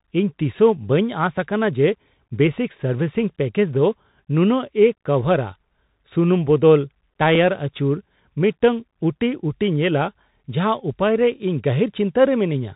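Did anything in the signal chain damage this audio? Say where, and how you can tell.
Yes. The codec stage did the main damage: the whole clip has passed through a Bluetooth CVSD headset codec, which fits a 64 kbit/s CVSD link. CVSD sends one bit per sample saying only up or down, with an adapting step size. Nothing above 3.8 kHz survives, so the speech sounds narrow and boxed-in. Where the level climbs fast the step can't keep up, so s sounds come out scratchy and a granular hiss sits beneath the speech. The damage is plainly audible throughout.

There is also one short skip at 7.35 s, where a few milliseconds of audio are missing and the two sides are butted together with no gap. It points to a driver or buffer stage that handles audio in chunks. The likely cause is audio missing between chunks, with a chunk size of about 2.0 s, so a sliver is dropped as one block closes and the next opens. 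The jump in the waveform is heard as a brief hiccup.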